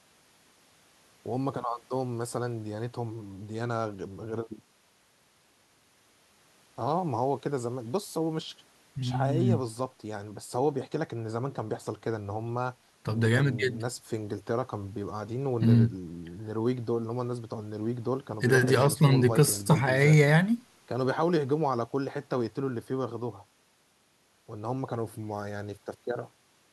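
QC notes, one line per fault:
Nothing to flag on this speech clip, so no QC lines are needed.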